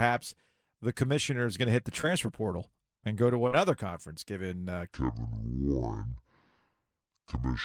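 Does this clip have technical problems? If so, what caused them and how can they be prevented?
Yes. There is short concealed packet loss at 2.01 to 2.05 s and again at 3.47 to 3.53 s. Each time, a piece of the call reached the decoder too late to be used. At 2.01 s about 20 ms went missing and 15 ms was filled in. At 3.47 s about 40 ms was lost and 40 ms was filled. The receiver bridged each gap by extending the sound just before it, then blended back into the real audio. Each gap is heard as a brief smear or wobble. Adding jitter buffering, or forward error correction on the network link, would prevent it.

From 4.89 s to the end, the speech plays at the wrong speed. It runs at 0.58 times its proper rate. Speed and pitch drop together, so the speech turns slow and deep, roughly ten semitones low. The section changes at a clear point rather than drifting. The likely cause is a player or editing step that read this part against the wrong clock. 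Checking that sample-rate settings match at every stage of playback and editing would prevent it.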